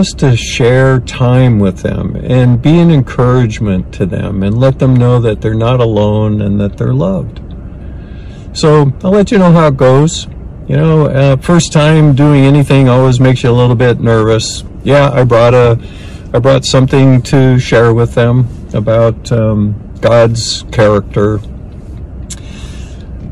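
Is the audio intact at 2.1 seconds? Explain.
No. At 2.1 s, as everywhere else in the clip, the audio suffers hard clipping. The level was driven about 9 dB past what a stage in the chain could pass, so every waveform peak above that ceiling was sliced flat, affecting a modest but steady share of samples. Those squared-off tops generate harmonics far up the spectrum, which come through as a harsh fuzz and crackle riding on each louder moment of the sound.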